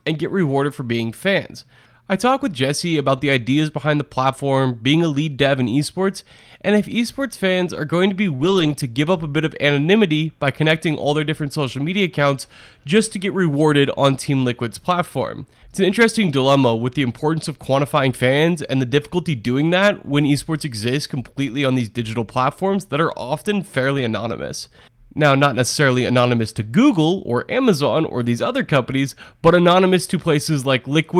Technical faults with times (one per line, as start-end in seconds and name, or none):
3.17 lost packet rebuilt from error correction
8.35-8.41 short concealed packet loss
8.39-8.81 lost packet rebuilt from error correction
21.47 lost packet rebuilt from error correction
23.97-24.03 lost packet rebuilt from error correction
28.23 lost packet rebuilt from error correction